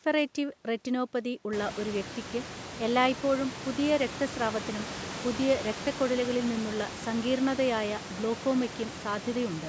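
No technical faults are audible in this speech.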